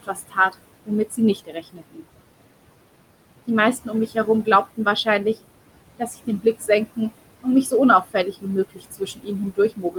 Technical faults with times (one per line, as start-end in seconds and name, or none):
0.00-9.99 noise suppressor artifacts
0.03-0.55 speech cut by the noise suppressor
0.86-2.04 speech cut by the noise suppressor
3.84-5.37 speech cut by the noise suppressor
5.98-6.99 speech cut by the noise suppressor
8.04-9.99 speech cut by the noise suppressor